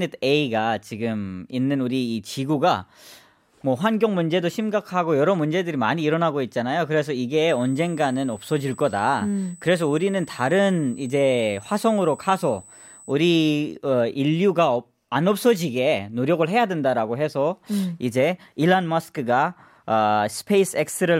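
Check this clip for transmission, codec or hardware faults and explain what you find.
One hardware fault turns up in this speech clip. From 7.49 to 13.12 s, right after "일어나고 있잖아요 그래서 이게", a thin, steady high-pitched whine sits at 8 kHz, roughly 25 dB below the speech. This is USB whine: current drawn in 125-microsecond microframes leaks through power or ground into the audio path.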